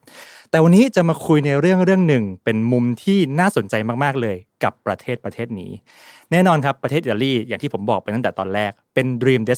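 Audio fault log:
No faults heard anywhere in this speech recording.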